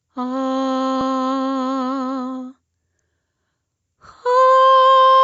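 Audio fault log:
Throughout: gain pumping. The music's level keeps dipping and recovering by about 5 dB, likely from gain set too high with a fast limiter clamping every loud hit.
1.01 s and 3.02 s: overlapping chunks. Each 2-second chunk starts 6.5 ms early, so that slice plays twice at the join, giving a regular click or stutter.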